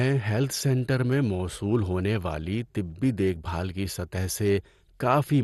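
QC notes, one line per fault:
throughout, MP2 compression likely: dull speech, nothing above 12.2 kHz, with a gurgly, granular edge from starved sub-bands, which fits a rate near 64 kbps.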